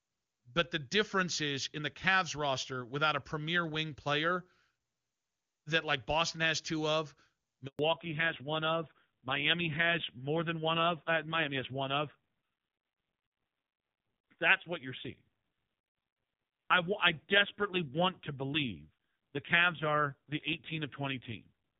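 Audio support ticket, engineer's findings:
Handover gap at 7.67 to 7.79 s: speech cuts out and drops to silence for 120 ms, then comes back on a different-sounding link. Looks like the call got moved between networks and no speech frames made it across during the switch, so whatever was said in that window is gone.

Fallback to narrowband from 7.79 s to the end: nothing above 4 kHz from there on, so the voice goes dull and rougher than before. The call apparently dropped out of HD Voice into an old narrowband codec at a low rate, which fits AMR-NB around 5.9 kbit/s. Before the switch the wideband path sounds clean, consistent with AMR-WB at a high rate like 23.85 kbit/s.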